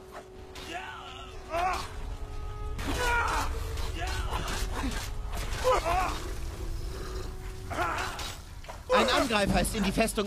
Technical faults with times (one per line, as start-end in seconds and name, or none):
0.00-6.00 adaptive stream starting at a low bitrate